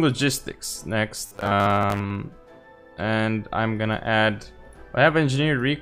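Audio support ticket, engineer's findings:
1.20–2.17 s: rigid metallic buzz at 100 Hz locked over the sound, robotic sound from repeated short buffers. Likely input underruns; playback loops the last buffer, which fits a 10 ms buffer, while roughly half the real audio is skipped.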